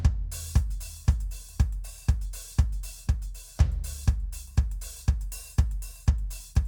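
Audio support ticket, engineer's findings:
No transport or processing faults found on the music signal; level, continuity and channel behaviour present as expected for the delivered stream.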